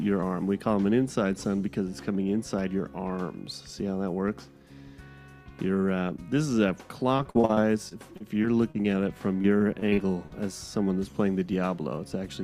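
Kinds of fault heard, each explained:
Repeated packet loss (robotic sound): the stream kept losing or receiving late chunks of data, and each hole was patched by stretching the last received sound forward, with the next dropout following soon after. From 7.17 to 8.86 s, about a dozen brief holes, the longest 39 ms, leave roughly a sixth of the span patched. From 9.42 to 10.33 s, holes up to 48 ms cover nearly a fifth of the span. Both stretches come out choppy, with pieces missing.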